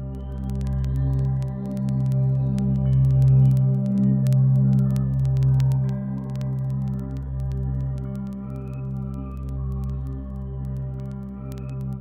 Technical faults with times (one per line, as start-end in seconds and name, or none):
0.15-11.99 word clock ticks